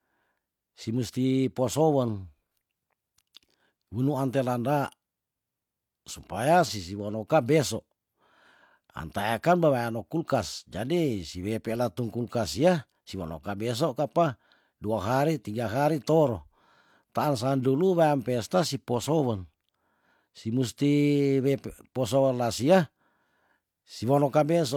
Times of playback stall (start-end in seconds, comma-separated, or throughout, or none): none